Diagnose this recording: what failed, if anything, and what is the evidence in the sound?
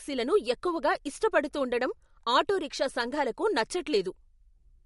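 The codec stage failed, likely from MP3 compression: throughout the speech, content stops above 11.2 kHz and codec damage is plainly audible, which points to a low bitrate near 48 kbps. Short of bits, the encoder zeroes weak frequency lines frame by frame, giving a swirling texture.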